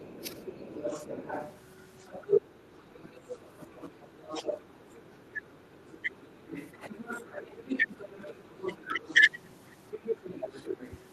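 From the start to 9.3 s, the other side's voice leaks through underneath the talker. It is a second, quieter voice sitting around 15 dB below the main speech, because the echo canceller, likely struggling with the loudspeaker path at the talker's end, fails to remove all of the far-end playback from the microphone signal.

Over the same stretch, the talker's own speech is suppressed in double talk at 0.0–0.47 s, 2.5–3.68 s, 4.72–6.07 s, 6.94–7.23 s, 7.86–8.2 s and 8.8–9.03 s. When both ends talk at once, the canceller likely cannot separate near speech from echo and turns both down. The near voice dips by about 15 dB. The dip at 6.94 s is shallower, only a few dB.

From 9.91 to 11.01 s, the far-end leak returns louder, around 10 dB below the speech.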